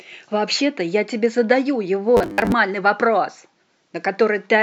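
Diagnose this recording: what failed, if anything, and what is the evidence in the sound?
The driver or buffer stage likely ran short of incoming audio and covered each gap by replaying the most recent short buffer, producing robotic sound from repeated short buffers. From 2.17 to 2.52 s the speech collapses into a rigid, metallic buzz at 100 Hz that still loosely tracks the words. That fixed pitch points to a loop of about 10 ms, and with roughly half the audio being repeats, real material was skipped in between.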